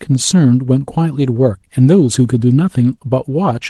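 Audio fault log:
No faults heard anywhere in this speech recording.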